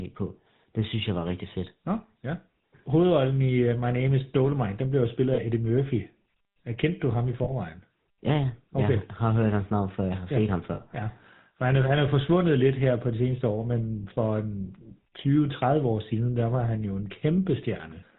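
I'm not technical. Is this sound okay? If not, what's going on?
No. The whole recording has a buzzy, gravelly roughness, and anything above 4 kHz is missing, so the speech sounds dull and grainy. This is the GSM full-rate codec, an early mobile-phone system that rebuilds the voice from a simplified model instead of sending the real sound.

There are also three short metallic rings where the sound briefly sticks, each under a tenth of a second long. They come at 5.34 s after "den blev jo spillet", at 7.44 s after "kendte du ham i", and at 10.74 s. These are lost GSM frames. Bits of the signal went missing, and the phone filled each gap by repeating the last good piece.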